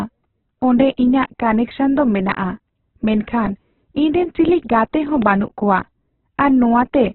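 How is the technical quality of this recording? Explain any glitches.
Pretty rough. The speech is heavily band-limited and grainy throughout, and there's one sharp glitch near the end.

First, Opus compression across the whole clip. Nothing comes through above about 4.1 kHz, so it sounds narrowband and muffled, with a rough, grainy texture on the voice. That points to a very low bitrate, around 8 kbps, likely in Opus's CELT music mode, which fills starved bands with folded or noisy content rather than leaving holes.

Second, a loud pop from 5.22 to 5.24 s. It's a single sharp click sitting about 10 dB above the speech, which carries on underneath. It's likely a voltage spike from a plug, switch, static or driver glitch, shaped by the downstream circuitry into that quick snap.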